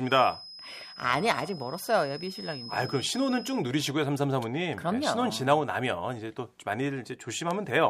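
From the start to 3.66 s, a thin, steady whistle at 5.1 kHz sits well below the speech, swelling and fading slowly in level. This feedback whistle is likely a loudspeaker-to-microphone loop held right at the edge of feedback, sustaining one tone without running away.

At 7.51 s a single sharp, broadband tick appears, peaking at about -19 dBFS and unrelated to the speech around it. This bit error spike comes from a flipped bit corrupting three consecutive samples, which jump by a power of two and snap back.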